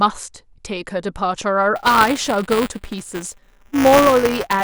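From 1.76 s to the end, buffer tearing sets in on the speech. Writer and hardware have slipped within a ring buffer, so a small slice of each period carries audio roughly 10 ms stale, giving a steady robotic 200 Hz buzz whenever sound is present.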